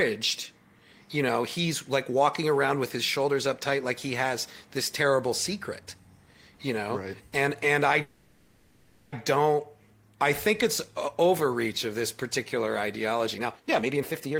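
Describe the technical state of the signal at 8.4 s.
At 8.4 s the speech is inside a call audio freeze running from 8.01 to 9.14 s. For about 1.1 s the receiver stretches the last sound into a fading buzz or hiss that never quite drops to silence, most likely because packets stalled and the jitter buffer ran dry. Unlike a dropout, nothing is cut: speech resumes exactly where it stopped, only about 1.1 s later than it should.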